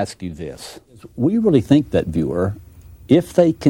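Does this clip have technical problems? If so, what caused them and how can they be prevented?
No, no technical problems here.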